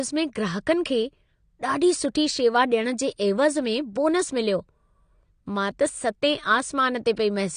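From the very start the speech sounds dull and smeared, with nothing above 9.7 kHz. It's likely AAC compression at a low bitrate, say around 32 kbps.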